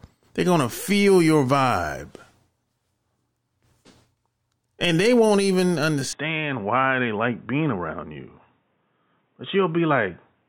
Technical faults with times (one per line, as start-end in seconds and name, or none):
6.13-10.48 input switched to a poorer device